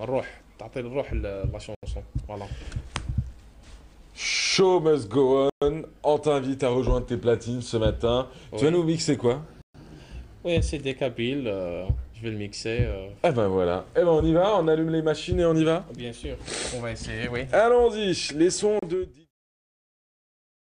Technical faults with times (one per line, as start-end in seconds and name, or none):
1.75-1.83 Bluetooth stall
5.50-5.62 Bluetooth stall
9.62-9.75 Bluetooth stall
18.79-18.82 Bluetooth stall